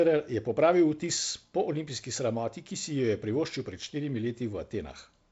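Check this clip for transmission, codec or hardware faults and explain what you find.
Nothing here counts as a fault: the speech comes through a G.722 wideband link at 48 kbit/s that is working as it should, with its usual light coding texture and no content above about 7.7 kHz.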